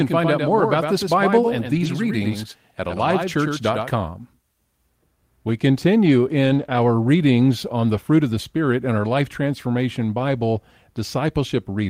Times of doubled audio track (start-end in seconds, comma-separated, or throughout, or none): 0.00-3.90